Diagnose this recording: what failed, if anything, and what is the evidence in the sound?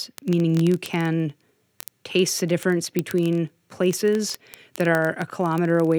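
Word clock ticks at the digital interface, 0.11 s to the end: single-sample slips roughly every 20 ms from an unlocked receiver clock. Their steady rate rules out random crackle.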